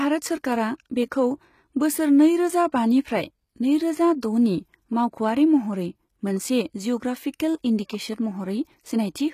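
From start to finish the speech carries plainly audible HE-AAC compression. The top stops near 14.9 kHz. Above the crossover the treble is rebuilt from copied lower bands, so s sounds turn gritty and lispy. That points to a low bitrate, likely around 20 kbps.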